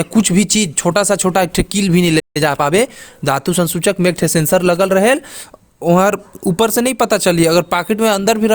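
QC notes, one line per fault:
2.19–2.37 s, playback stall: the speech cuts off mid-flow and the output drops to silence for roughly 155 ms, then resumes. The likely cause is the player running dry or its thread blocking. On the waveform this is a flat gap. The spectrogram shows a blank vertical band.
2.37–2.97 s, time-compressed catch-up: after the gap the speech runs about 1.25 times fast at unchanged pitch. Small pieces are cut out and cross-faded to clear the backlog. The spectrogram shows harmonics at normal height but squeezed in time.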